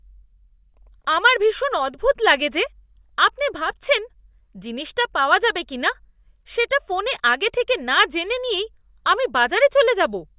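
Nothing technically wrong can be heard in this recording of speech, and the signal stays steady and intact throughout.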